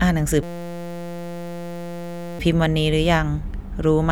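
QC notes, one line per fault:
0.43–2.39 s, system hang loop: the playback system stalled while the audio hardware kept replaying the same small stretch of its ring buffer, a 5.8 ms segment that fits a 256-sample buffer. That slice cycles hundreds of times at a steady 172 Hz, so for nearly two seconds the speech is replaced by a flat, pitched buzz rather than a stutter. The loop is far too short for any of the repeated audio to be heard as separate sound.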